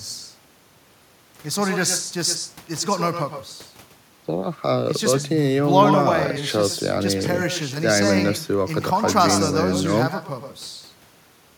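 From start to finish, the speech carries an echo with no canceller. Each phrase is followed about a tenth of a second later by a second copy, about 8 dB quieter. That copy sounds thinner than the original. The far end is playing the call through a loudspeaker. Its microphone picks the sound back up, and nothing strips it out before it returns. The result is a constant doubled shadow behind every syllable.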